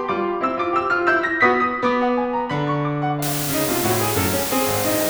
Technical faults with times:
3.22-5.10 low bit depth with dither

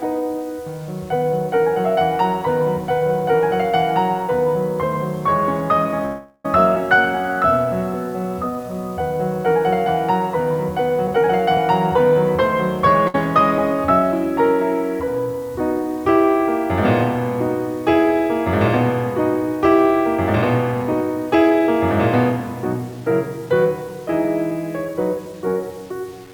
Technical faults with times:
0.00-26.33 low bit depth without dither
6.05-6.45 call audio freeze
6.75 skip ahead
6.96-9.03 jitter buffer slow-down
11.07-12.11 jitter buffer speed-up
13.07-13.15 short stall from a late packet
20.36-25.33 jitter buffer speed-up

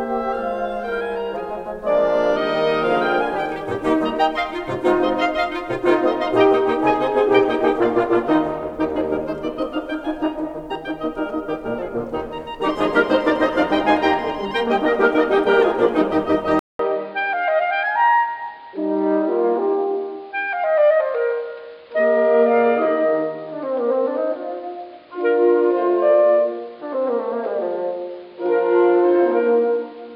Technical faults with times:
16.59-30.16 input switched to a poorer device

